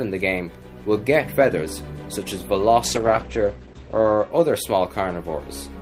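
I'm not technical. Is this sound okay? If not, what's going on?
No. From 2.85 to 4.37 s there's a call bitrate drop: the connection briefly sent less detail, so the sound turns muffled and rough. Unlike a dropout, it never goes silent.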